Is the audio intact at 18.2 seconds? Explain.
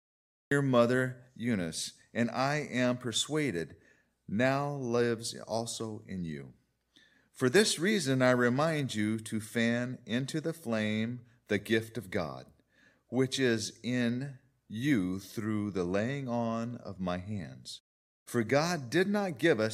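Yes, the audio is intact at 18.2 seconds, with no fault at that moment.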